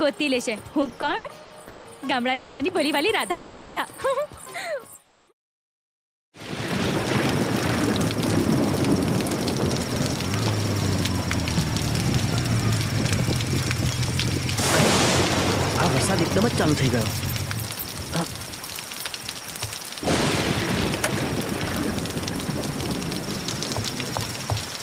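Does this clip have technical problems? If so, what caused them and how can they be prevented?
Yes. From 0.81 to 1.87 s the sound drags and stutters through ten short holds, the longest 170 ms, as repeated stalls (stutter) from late packets starving the jitter buffer. A larger adaptive jitter buffer would absorb this.

At 2.33 to 2.61 s, 3.31 to 3.78 s and 5.02 to 5.44 s the sound hangs as a fading continuation, then resumes, likely call audio freezes from packets held up in transit. More stable network routing would prevent them.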